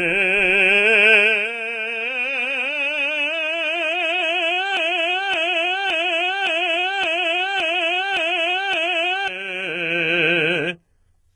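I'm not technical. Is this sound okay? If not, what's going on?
No. Throughout this music, the high end sounds gritty and metallic, and nothing at all above about 11.5 kHz. This is most likely HE-AAC compression squeezed very hard. To save space, it keeps only the lower part of the sound and rebuilds the top by copying lower parts upward, so the treble is imitated rather than real and doesn't quite fit.

From 4.77 to 9.28 seconds, the same short snippet of about 0.57 seconds plays over and over, eight times back to back, like a scratched record. This is a broken-record loop. The likely cause is that the player or stream stalled and kept resending the last bit of audio it had. Whatever music should have played during those four and a half seconds is missing.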